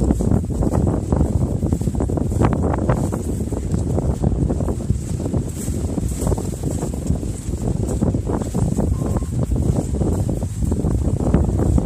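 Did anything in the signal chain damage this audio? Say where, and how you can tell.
Yes, at the codec stage. There's a corrupt frame decoded right around 8.00 s: a brief chirpy blip that doesn't belong to the surrounding sound. Flipped bits in a couple of compressed frames got decoded anyway, so misread gains and codes dumped energy at the wrong frequencies.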